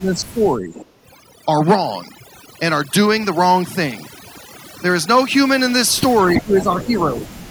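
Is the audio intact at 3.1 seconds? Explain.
No. Overdone noise removal runs throughout, at 3.1 s too: bands near the noise floor are cut, leaving near-silent gaps with twinkling specks and holes in the spectrogram.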